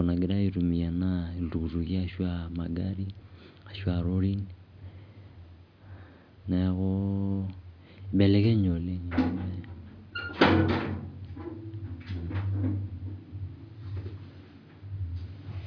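No technical faults are audible anywhere in this speech recording.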